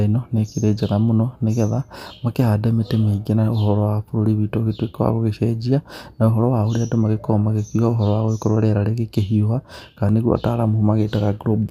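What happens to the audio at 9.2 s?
At 9.2 s the speech is inside a stretch of channel delay (comb filtering) that runs from 6.51 s to the end of the clip. One channel lags the other by roughly a single sample, a few hundredths of a millisecond, and when the two are summed to mono the shared content cancels near the top of the band, with the first notch up around 20 kHz. The result is a dulled, less airy top end.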